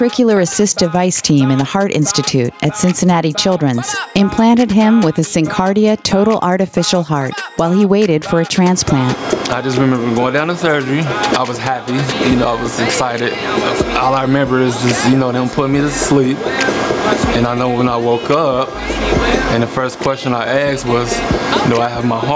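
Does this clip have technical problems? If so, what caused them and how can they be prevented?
Yes. Gain pumping runs throughout, with the level swinging by around 15 dB and dynamics squashed. The likely cause is input gain set far too high, forcing a fast limiter to clamp repeatedly. Lowering microphone gain so peaks sit well below the limiter threshold prevents it.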